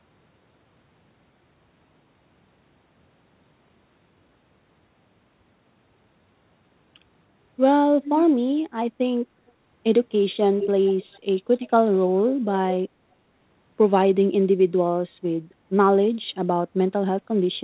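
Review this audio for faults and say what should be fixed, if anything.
Echo leak at 8.04–8.26 s, 9.48–9.52 s and 10.59–11.19 s: a delayed copy of the speech returns about 314 ms late in the first two, 405 ms in the third, roughly 10 dB down, except the faint second one. Likely cause: the far end's echo canceller missed loudspeaker pickup. Preventing it needs better echo cancellation or a headset at the far end.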